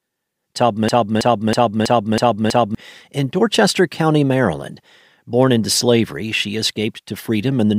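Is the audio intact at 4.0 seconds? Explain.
Yes, at 4.0 seconds the speech is intact, with no fault of any kind audible at that moment.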